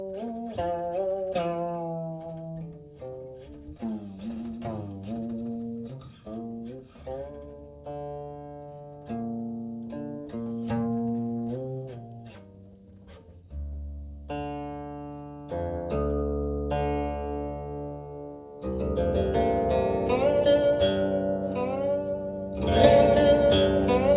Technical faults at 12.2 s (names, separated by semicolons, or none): none